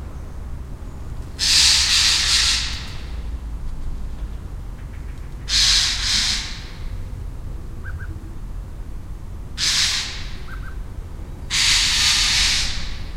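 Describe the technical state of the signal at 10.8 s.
A doubled audio track is present at 10.8 s, as it is across the whole clip. A second full-band copy of the sound trails the original by roughly 150 ms at about the same level, with no decay or room colouring. It is likely captured twice, through a slower parallel path or an edit holding two misaligned copies. Every onset is followed by a distinct, dry repeat, doubling transients into a flat slapback.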